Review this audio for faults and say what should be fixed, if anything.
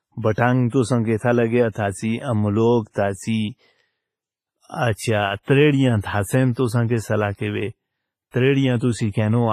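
Throughout the speech, consonants ring and smear, a washy hiss breathes with the sound, and nothing reaches above 15.4 kHz. The cause is likely heavy WMA compression at a low bitrate, around 24 kbps, whose long transform blocks spread quantisation noise and zero weak spectral lines. Re-encode from the original at a higher bitrate or in a lossless format to prevent it.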